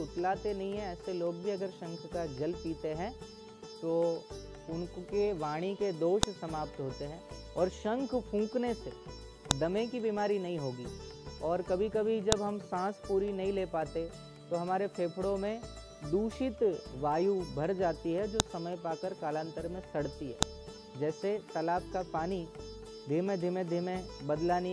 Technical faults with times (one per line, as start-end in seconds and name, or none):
6.23 file header played as audio
9.51 file header played as audio
12.32 file header played as audio
18.40 file header played as audio
20.42 file header played as audio